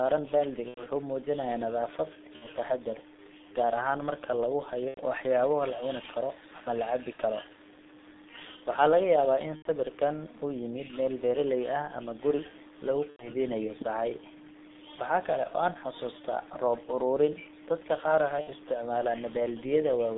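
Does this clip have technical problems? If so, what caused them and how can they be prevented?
Yes. The speech carries G.723.1 codec damage from start to finish. Only about 200 Hz to 3.7 kHz gets through, so the voice is muffled and boxy. The damage is heavy and fits the 6.3 kbit/s mode. This codec models the voice in coarse 30 ms steps, so consonants smear and the tone turns hoarse. To prevent it, use a wideband codec such as Opus or G.722 end to end.

There is also VoIP packet loss concealed by the speech codec. It occurs at 0.68–0.82, 2.36–2.49, 4.88–5.01, 7.13–7.22, 9.56–9.67, 13.10–13.30, 15.47–15.52 and 18.41–18.51 s. Each gap fits one to three 30 ms frames going missing. The decoder repeats its last pitch and filter at falling gain, so the sound stretches into a fading buzz. The voice stays weak briefly after packets resume. To prevent it, use a steadier network path, forward error correction or redundant packets.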